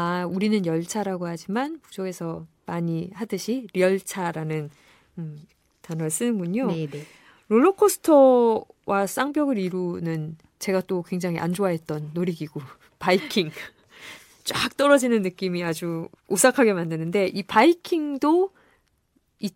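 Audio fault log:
No technical faults can be heard in the speech signal at any point.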